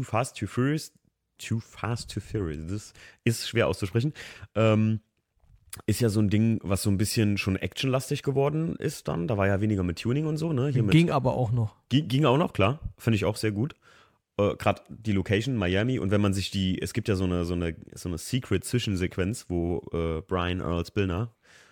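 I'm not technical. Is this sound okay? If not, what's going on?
Yes, the recording has no technical problems in its signal.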